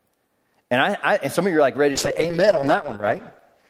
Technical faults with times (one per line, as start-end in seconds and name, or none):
1.92-3.69 call bitrate drop